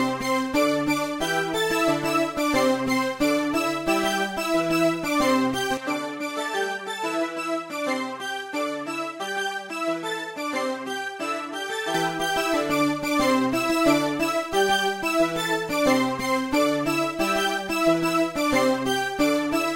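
From 5.77 s to 11.94 s the everyday sound turns duller and drops by roughly 5 dB, with nothing above 13 kHz and a faint new noise floor well below the signal. The change comes without any gap, likely an input switched to a poorer device.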